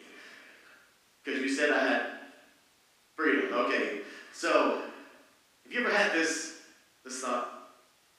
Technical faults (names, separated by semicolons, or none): none